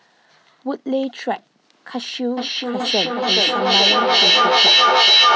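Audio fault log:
2.37–5.35 s: feedback echo between two devices. The sound keeps returning roughly every 0.4 s, thinner and ringier each pass, building to about 9 dB over the speech instead of fading, because a nearby second device replays the call into a mic its canceller can't cover.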